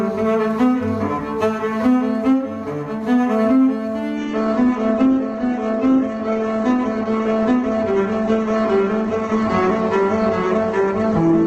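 At 4.17 s the adaptive stream drops to a lower bitrate and stays there to the end of the clip: the player, faced with a slower connection, switches to a leaner encoding without interrupting playback. The change is abrupt but gapless. From that point nothing is left above about 8.1 kHz, so the top end goes dull, and the remaining sound takes on a smeared, synthetic coding texture consistent with a step from roughly 64 kbit/s Opus down to around 12 kbit/s.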